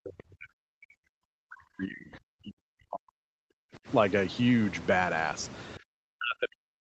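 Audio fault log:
0.00–3.87 s and 5.78–6.81 s, speech suppressed in double talk: the speech sinks by as much as about 40 dB in both stretches. The likely cause is an echo canceller that mistook the talker for loudspeaker echo while both sides spoke, so it turned the talker down.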